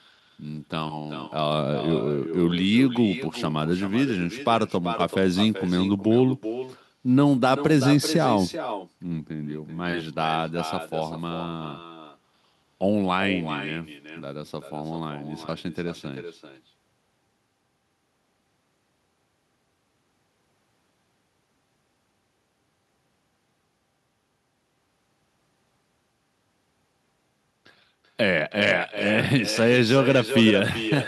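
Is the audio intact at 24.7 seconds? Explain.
No, at 24.7 seconds, like the whole clip, there's echo with no canceller: the far end's loudspeaker leaks back, giving a thinner copy about 11 dB down, roughly 0.4 s late.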